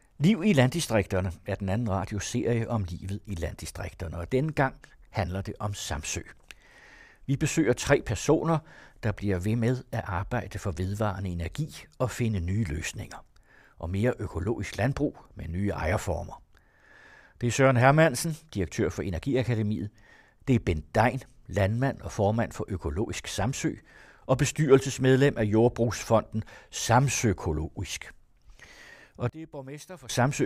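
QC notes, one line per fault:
29.29–30.09 s, one channel inverted: in mono the speech drops by about 21 dB and turns faint for this stretch. This is likely one stereo channel with reversed polarity, so the centred content common to both sides cancels and only the faint inter-channel difference remains.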